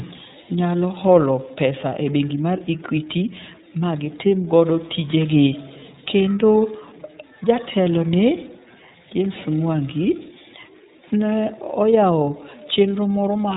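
From start to finish, the speech carries the sound of the iLBC codec. It is a narrowband VoIP coder, and nothing above about 3.8 kHz gets through. Consonants lose their crispness and the sound is boxed in. Each frame's excitation is coded on its own, with no help from the frame before. The result is plainly audible roughness and a synthetic edge. The codec ran with 30 ms frames in its 13.33 kbps mode.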